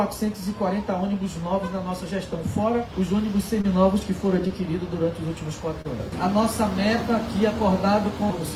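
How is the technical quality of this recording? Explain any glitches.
The recording has three brief dropouts. Short concealed packet loss occurs at 3.61–3.65 s, 4.47–4.51 s and 5.81–5.86 s: about 20 ms of audio arrived too late each time, so the receiver extrapolated the preceding sound and blended back, leaving a short smear or wobble.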